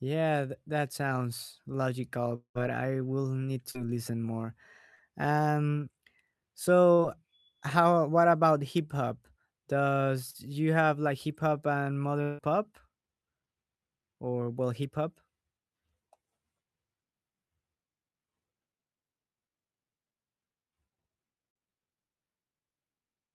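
Long network dropout at 2.35 to 2.58 s, between "that sounds logical" and "I will need": about 0.2 s of audio is missing, likely because packets stopped arriving. The last sound is stretched into a fading buzz, then about 90 ms of silence before the audio resumes.

Short concealed packet loss at 3.71 s (just after "I will need", before "listen more"), 4.94 s and 10.30 s: about 40 ms each never reached the decoder in time. The receiver extended the preceding sound to cover each gap, which is heard as a brief smear or wobble.

Long network dropout at 12.22 to 12.41 s, after "like hip hop and": about 160 ms is lost, and the previous sound is continued as a fading smear throughout. It blends straight back into the resumed audio with no silent gap.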